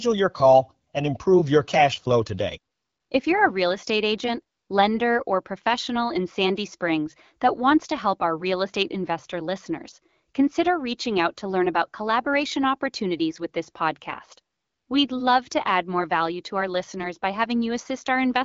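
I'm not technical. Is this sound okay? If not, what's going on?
Yes, this sounds fine: it's speech carried over an HD Voice phone connection, which trims off the very highest treble, and nothing has gone wrong with it.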